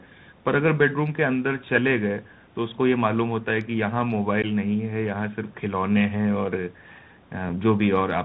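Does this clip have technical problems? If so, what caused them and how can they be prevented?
Yes. The Bluetooth CVSD headset codec runs through the whole speech clip: one-bit up/down steps at 64 kHz cut everything above 4 kHz, scratch the s sounds and leave a granular hiss. Unlike packet-based codecs, which warble, it distorts where loud highs outrun the adapting step. Using a wideband (mSBC or LC3) headset link prevents it.

Unconcealed Bluetooth headset packet loss leaves abrupt silent holes at 4.42–4.45 s (about 15 ms, a few packets) and at 7.49 s (about 7.5 ms, a couple of packets), with the speech briefly quieter afterward. Dropouts filled by concealment would sound smeared instead. Keeping the headset close to the phone and away from radio interference prevents it.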